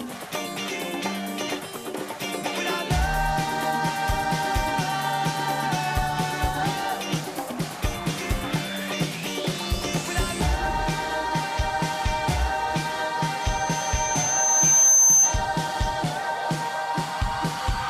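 At 13.42 s a loudspeaker feedback squeal begins: a microphone is picking up its own loudspeaker, and at 6.2 kHz the loop gain has passed unity, so that one frequency feeds on itself. It swells over roughly a second and a half to around 10 dB above the surrounding sound, then stops at 15.43 s. Unlike a steady interference whine, it starts from nothing and grows, and it sits on a single pitch.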